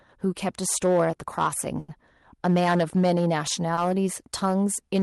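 A speech recording driven about 11 dB past what one of its stages could pass shows hard clipping throughout. Around 2 percent of samples hit the ceiling and are sliced flat, so the loudest syllables carry a harsh, crackly edge from the added high harmonics. Two short stalls from a late packet also occur, at 1.79 to 1.90 s and 3.74 to 3.88 s. Each time the jitter buffer ran dry, so the receiver held the last sound, for about 90 ms and then 30 ms, before resuming without loss. Each is heard as a brief frozen drag with a slight buzz or dip.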